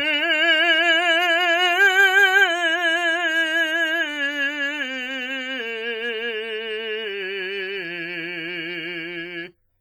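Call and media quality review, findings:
Likely WMA compression at a low bitrate, around 24 kbps, heavy throughout: long transform blocks smear quantisation noise, weak lines dropped. Music rings and washes, hiss breathing with signal.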